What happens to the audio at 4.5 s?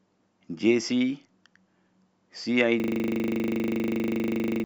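At 4.5 s the sound is stuck in a mechanical rattle at 25 Hz. The same 40 ms fragment repeats exactly, dozens of times, from 2.8 s to 4.64 s. This is a system hang loop. The computer or audio driver stopped supplying new samples, but the sound hardware kept replaying its ring buffer, which fits a 40 ms buffer. About two seconds of the real audio never reached the output.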